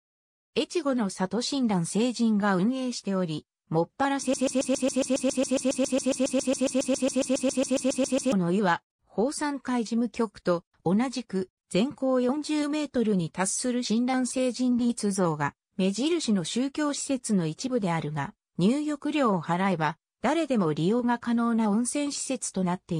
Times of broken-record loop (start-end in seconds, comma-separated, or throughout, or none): 4.34-8.33